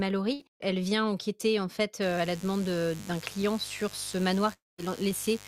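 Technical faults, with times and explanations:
0.33–0.45 s, burst of packet loss: about 60 ms of audio is missing. The receiver stretches the last sound for roughly 60 ms, turning it down as it goes. The spectrogram shows the stretched sound dimming, and the waveform decays before the speech jumps ahead.
2.02 s to the end, mains buzz: starting right after "vient enquêter en fait", a steady raspy 50 Hz buzz sits about 20 dB below the speech. Its sharp switching spikes produce a comb of evenly spaced harmonic lines reaching into the kHz range on the spectrogram.
4.53–4.80 s, long network dropout: about 260 ms of speech never arrives, likely because of a network dropout. The last sound is continued and fades, then settles into near-silence under the hum. The spectrogram shows the stretched sound dying away and then a blank band except for the mains lines.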